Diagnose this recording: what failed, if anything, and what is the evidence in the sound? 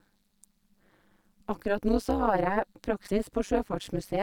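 Overlap-add ripple runs through the whole clip as a metallic buzz on the speech, with extra tones around it, at around 200 times a second. The fault lies in a frame-based processing stage, such as call processing or a codec's resynthesis. The audio was split into windowed frames and rejoined with an overlap whose windows don't sum to a constant gain. The level therefore dips once per frame, by about 60 dB at its deepest, so the signal is nearly chopped at the frame rate.

Damaged data in a compressed stream appears from 3.04 to 3.11 s as a short disturbance lasting about 70 ms, a chirp, squawk, click or short hole. The failure is in the stored or transmitted compressed stream, and it surfaces at the decoder. Corrupted bytes made the decoder misread the frames there and lose sync. It then hunted for the next valid frame header, which garbled that stretch.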